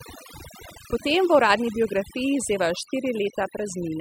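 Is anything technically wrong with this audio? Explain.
Yes, there's overdone noise removal running through the whole clip. The noise reduction was pushed too hard, so any frequency band sitting near its idea of the noise gets pulled way down or switched off entirely, and the quieter bits of the speech get caught in that too. You can hear it in the gaps, where the background drops and breaks up into little twinkling specks.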